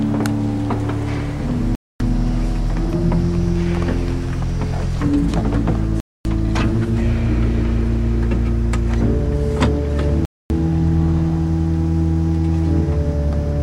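Gap between chunks at 1.75–2.00 s, 6.00–6.25 s and 10.25–10.50 s: the audio was delivered in 4 s chunks, with 250 ms of silence left at each join. Nothing is lost, but three regularly spaced holes interrupt the sound.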